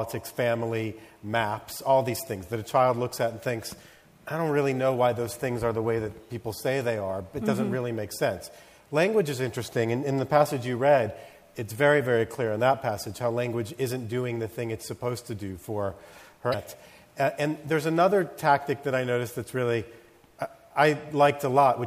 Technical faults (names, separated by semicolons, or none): damaged data in a compressed stream